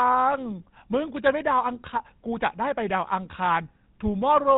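From start to finish the speech carries the roughness of the GSM full-rate codec, and the damage is plainly audible. The codec rebuilds the signal from a vocal-tract model excited by evenly spaced pulses, with much of the excitation detail thrown away, which gives the voice a buzzy, gravelly texture, a result that fits a rate near 13 kbps. The bandwidth is also cut: nothing remains above about 3.9 kHz, so the sound is dull and boxy.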